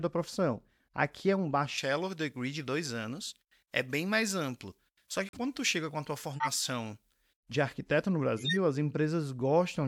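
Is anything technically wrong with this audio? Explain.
Yes, there are three kinds of fault in this speech.

Pre-emphasis left on, 1.78 to 7.40 s: treble boosted before transmission was never cut back, leaving about 11 dB extra at 10 kHz, consistent with a J.17 curve. The speech turns thin, bright and hissy.

Corrupt frame muted, 5.26 to 5.37 s: the decoder rejected damaged frames and silence replaced them, an abrupt 0.11 s hole that fits roughly two frame lengths.

Corrupt frame decoded, 6.33 to 6.48 s and 8.37 to 8.57 s: damaged frames were played anyway, putting energy at wrong frequencies. Each is a brief burst of misplaced energy peaking around -20 dBFS.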